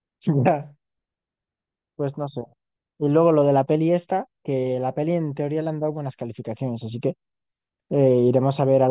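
No technical faults can be heard anywhere in this speech recording. Nothing in the audio calls for a timestamp or any further comment.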